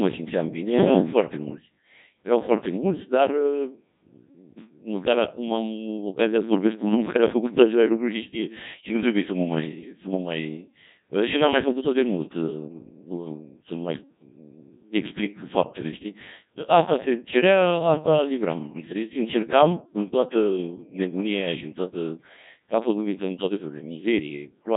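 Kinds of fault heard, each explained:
Codec 2 vocoder: The speech has been rebuilt from a handful of parameters, pitch, voicing, energy and a rough spectral envelope, rather than from its waveform, which fits a very low bitrate of around 1.6 kbit/s. The damage is heavy, with a robotic, buzzy tone all the way through. On a spectrogram, energy stops sharply at about 3.8 kHz. The waveform no longer resembles natural speech.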